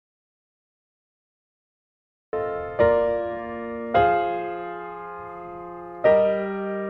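From the very start to 2.33 s there's an audio dropout to silence, plain silence with no room tone, likely a lost input link before the sound cuts in mid-flow.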